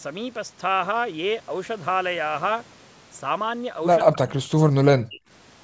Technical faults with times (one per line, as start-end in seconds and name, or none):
4.04-5.22 speech suppressed in double talk